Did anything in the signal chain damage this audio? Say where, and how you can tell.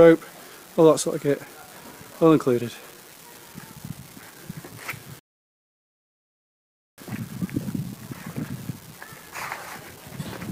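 Yes. A steady crackle or fizz runs through the whole clip and carries on into the pauses, which points to an unreliable data bit at the converter or digital interface. One marginal data line flips its bit in a random share of samples, so every click is the same size. Analogue crackle or dropouts would vary in level.

The second fault is a rebuffering stall at playback. From 5.19 to 6.98 s the sound cuts to silence, then resumes exactly where it stopped, adding about 1.8 s. The player ran out of downloaded audio and waited. Unlike packet loss, nothing is skipped; only time is added.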